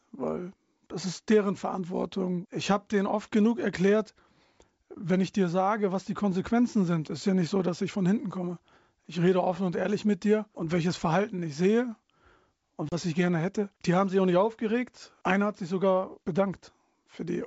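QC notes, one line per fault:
12.89 to 12.95 s, packet loss on an ADPCM call: a few packets (about 30 ms) drop to hard silence, and the desynced predictor makes "ich gerne hätte" return glitchy briefly.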